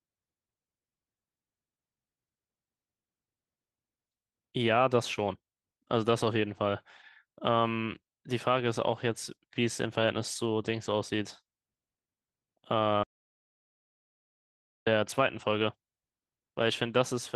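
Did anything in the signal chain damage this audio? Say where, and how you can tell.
Yes. The input was likely lost upstream of the recorder, which kept writing silence: an audio dropout to silence from 13.03 to 14.87 s, about 1.8 s of dead silence with no room tone, cutting the speech off.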